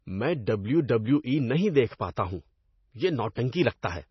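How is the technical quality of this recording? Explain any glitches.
Quality is poor, with heavy damage throughout the speech. Across the whole clip, likely MP3 compression at a low bitrate near 24 kbps cuts everything above 5.9 kHz and drops weak components frame by frame, giving a watery, swirly sound and dull, smeared consonants. A spectrogram shows a flat ceiling at 5.9 kHz with patchy, flickering gaps below it.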